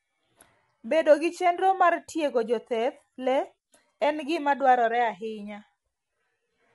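From start to finish the speech carries plainly audible coding damage: a rough, grainy texture with noise filling the gaps between pitch harmonics, and nothing at all above 11.6 kHz. The likely cause is low-delay AAC compression of the AAC-ELD kind, whose short frames cannot separate closely spaced harmonics well and spend bits quickly. The degree of damage fits a bitrate of around 32 kbps, too few to keep the harmonics clean.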